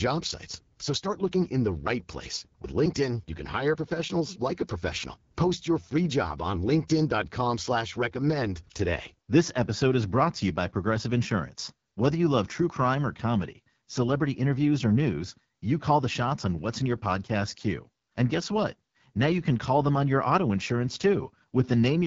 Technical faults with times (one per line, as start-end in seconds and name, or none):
0.00-22.06 AMR wideband (HD Voice) codec